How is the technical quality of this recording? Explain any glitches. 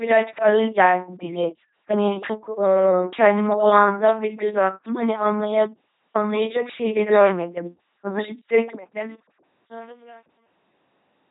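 The recording's technical quality is poor, with heavy coding damage from start to finish and a degraded ending.

The LPC-10 vocoder is present throughout. The speech has been squeezed through a very low-rate coder, consistent with LPC-10 at 2.4 kbit/s. That coder throws away the actual waveform and keeps only a short all-pole filter description plus a switch between pulse and noise excitation for each frame. Every stretch is forced to be either fully voiced or fully unvoiced. The result is a buzzy, mechanical, robotic voice, with stray buzz or hiss where that switch guesses wrong, and nothing above 3.8 kHz.

Truncation distortion on a fade runs from 8.87 s to the end at 11.31 s. The closing fade-out, which starts around 9 s and runs down to 11.3 s, passes through a gain stage that rounds to too few bits without dither, fitting a 9-bit word length. As the level sinks toward the smallest step, the waveform collapses into a handful of coarse square steps. 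From 9.41 s to 11.31 s this is worst: the tail turns gritty.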